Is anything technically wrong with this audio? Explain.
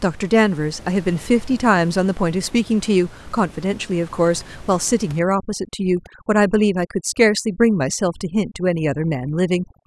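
Yes. From 5.19 s to the end, the speech shows overdone noise removal. The noise reducer is working too hard. It cuts individual frequency bands that sit near its noise estimate, taking quiet speech detail too. The background drops and breaks up into twinkling specks. Before that point, the room noise is audible about 23 dB below the speech.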